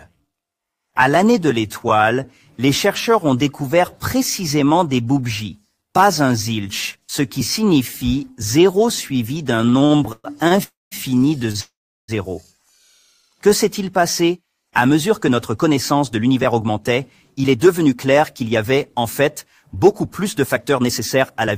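From 9.55 to 10.60 s there's a run of repeated stalls, a proper stutter: ten little gaps, the longest 116 ms, where the jitter buffer kept draining and the receiver held onto the last sound to cover. That padding adds up to about 0.3 s, roughly 29% of that stretch, so the audio drags and judders, though nothing actually goes missing.

Right after, 10.63 to 10.94 s, comes a call audio freeze. The sound hangs as a fading buzz or hiss and then drops to silence for about 0.18 s, 0.28 s of fill in total, before picking up exactly where it stopped. It's likely packets were held up in transit and the buffer ran dry.

At 11.51 to 11.57 s there's a short stall from a late packet. One packet missed its slot, so the last sound got stretched by about 29 ms, giving a held-too-long moment with a faint buzzy dip.

Straight into another freeze, 11.60 to 12.11 s, and this one's longer: 0.48 s of fill, including about 0.36 s of silence, then the audio carries on from the same point.

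From 13.00 to 13.97 s the jitter buffer slows down to rebuild its reserve. It repeats tiny pitch-period chunks to add 73 ms, so the audio runs at about 93% speed with the pitch unchanged, and sounds drawn out.

From 15.91 s to the end, 21.56 s, it's the reverse, a jitter buffer speed-up. The receiver trims short slivers, around 0.3 s overall, to cut latency. The audio runs at about 105%, same pitch but noticeably hurried.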